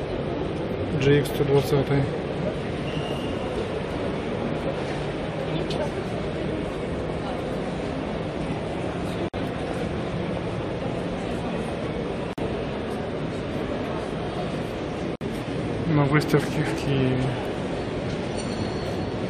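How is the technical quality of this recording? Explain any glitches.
The recording has three brief dropouts where the sound cuts to silence and then resumes. A gap at a join of encoded pieces occurs at 9.28 to 9.34 s (about 52 ms), 12.33 to 12.38 s (about 48 ms) and 15.16 to 15.21 s (about 56 ms). Each marks a seam where separately encoded segments were spliced without trimming the encoder's leading delay and final-frame padding. The result is a short hole with smeared edges, after which the audio picks up exactly where it stopped.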